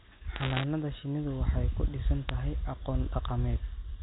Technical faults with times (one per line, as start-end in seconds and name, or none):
0.36-0.64 bit errors on a digital phone line
2.29 bit errors on a digital phone line